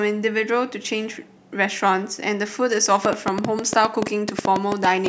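From 3.05 to 5.07 s, a train of clicks pops well above the speech, about eight a second at an uneven pace, likely from nearby interference.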